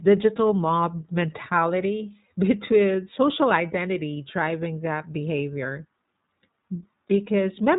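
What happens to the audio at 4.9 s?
At 4.9 s the speech sounds rough, slightly synthetic and muffled, with nothing above 3.8 kHz. That is iLBC codec damage, present throughout, coding each 20 ms frame independently.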